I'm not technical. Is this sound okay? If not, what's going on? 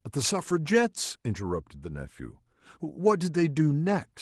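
Yes, this one sounds fine, and there's nothing here that needs fixing.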